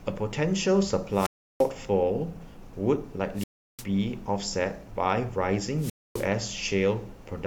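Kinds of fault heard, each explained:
Low bit depth without dither: The speech carries a fine grainy roughness that follows the voice, growing gritty on quiet syllables and fading tails instead of sitting as a steady hiss, with the error roughly 40 dB below the signal. This likely comes from the audio having been rounded to about 10 bits with no dither, so each sample snaps to a coarse step and the rounding error tracks the waveform as distortion.
Wireless microphone squelch dropout: The speech breaks three times, from 1.11 to 1.72 s, from 3.34 to 3.86 s and from 5.77 to 6.28 s. Each time, static swells, the audio falls into near silence, then the speech returns. The silent holes last about 340 ms, 350 ms and 260 ms. This happens when the radio link from an FM wireless microphone weakens until the receiver's squelch mutes the output, which reopens once the signal recovers.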